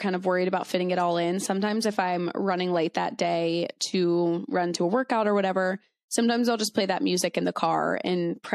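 Between "running late that day" and "to run to a", at 3.78 to 3.80 s, pre-echo puts 21 ms of hiss, about 16 dB up, ahead of an attack. Block-wide quantisation noise, consistent with a 36 ms window never switching to short blocks, leaves the onset smeared.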